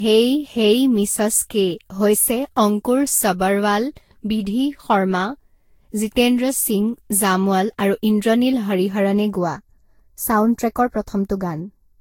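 Generation loss runs through all of this speech clip: the sound is swirly, smeared and hollow, with softened consonant attacks and nothing above 16.6 kHz. The likely cause is repeated lossy coding, about seven passes, consistent with Vorbis at around 60 kbit/s. Each decode and re-encode quantises the signal again on a shifted frame grid, so coding noise and spectral holes pile up beyond what that bitrate alone would produce. Channel delay (comb filtering) appears from 9.35 s, right after "ইন্দ্ৰনীল হৰিহৰণে", to the end at 12.00 s. One channel arrives roughly 0.15 ms behind the other, and when the two are summed to mono, the shared content cancels at evenly spaced frequencies. The first notch falls near 3 kHz, which gives that final stretch a thin, phasey colour.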